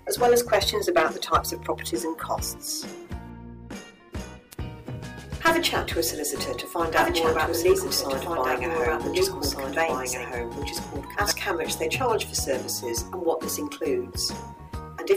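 A doubled audio track runs from 6.79 to 11.31 s: a second copy, about 5 dB quieter, trails by roughly one and a half seconds, likely from a slower second capture path.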